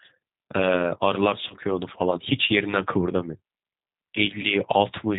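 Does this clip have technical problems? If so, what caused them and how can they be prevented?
Yes. Throughout the speech the sound is band-limited and slightly rough and synthetic, with nothing audible above 4 kHz. This is the G.729 codec at work, and the damage is plainly audible. The codec discards the waveform and rebuilds each 10 ms frame from a vocal-tract filter, a pitch predictor and a few pulses, at a rate that fits 8 kbit/s. A wideband codec such as G.722 or Opus at a higher bitrate would prevent this.

Two brief glitches follow, at 1.48 to 1.54 s and at 4.42 to 4.52 s. In each, the voice is stretched out and fades and then sounds weak for a moment before it recovers. This is VoIP packet loss concealed by the speech codec. Each gap fits a single lost 20 ms packet. The decoder fills the hole by repeating its last pitch and filter at falling gain. Because later frames build on that guessed state, the distortion outlasts the gap itself. 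A cleaner network path, QoS priority for voice traffic, or forward error correction would prevent it.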